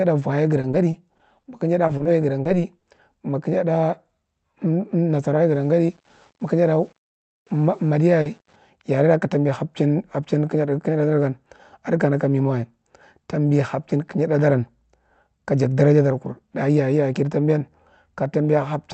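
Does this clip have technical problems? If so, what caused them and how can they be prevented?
Yes. Repeated packet loss (robotic sound) runs from 0.61 to 1.45 s: six gaps of up to 20 ms, about 120 ms in total, are patched by stretching the last sound, giving a choppy texture with pieces missing. A spectrogram shows smeared, repeated harmonic slices. A larger jitter buffer and forward error correction would prevent it.

Short concealed packet losses occur at 1.87–1.91, 1.97–2.01, 2.03–2.07, 2.43–2.47, 2.79–2.85, 2.95–2.99 and 8.21–8.27 s. Most are 20 ms; the ones at 2.79 and 8.21 s are 40 ms. Each leaves a brief smear or wobble, and the waveform shows an oddly smooth, repeated cycle. A steadier network path or packet redundancy would prevent them.

Low bit depth without dither covers 5.51 to 8.56 s, ending just before "yarera ka tambi hapchin". The grainy distortion follows the signal's level, and it is likely caused by rounding to 8 bits, which leaves noise about 40 dB below the signal. 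A spectrogram shows a raised, signal-shaped noise floor, and quiet waveform passages look stair-stepped. Keeping 16 bits or more, with dither when reducing, would prevent it.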